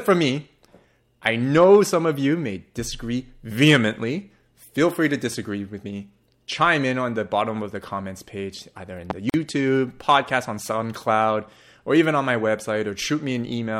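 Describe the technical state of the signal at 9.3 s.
A gap at a join of encoded pieces sits at 9.30 to 9.34 s, between "page either in the" and "podcast on". Untrimmed 10-second segments keep encoder delay and final-frame padding, opening a 44 ms silence with smeared edges before the speech resumes where it stopped.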